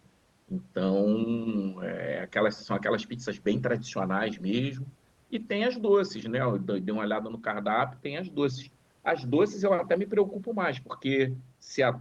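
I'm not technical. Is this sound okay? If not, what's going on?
Yes, this sound is fine, and nothing in it points to anything going wrong on its way through the call.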